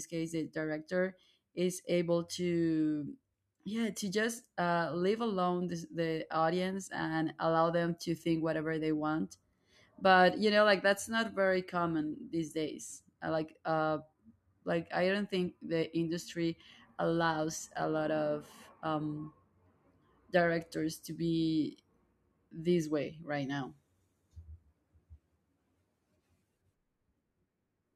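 After "not very common these", 12.78 to 19.59 s shows crude rate conversion. Unfiltered linear interpolation, fitting 48 to 44.1 kHz, adds faint inharmonic fizz.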